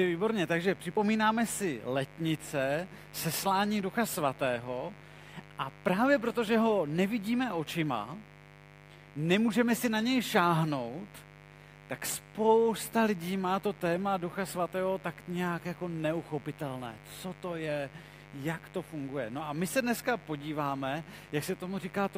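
From the first second to the end, a steady, raspy mains buzz runs beneath the sound, sitting roughly 20 dB below it. Sharp switching spikes from something like a dimmer, rectifier or unshielded run are leaking in twice per 50 Hz cycle, stacking harmonics of 50 Hz far up into the kilohertz range. That bright, edgy texture separates it from plain hum, which would stay a smooth, low tone near 50 or 100 Hz.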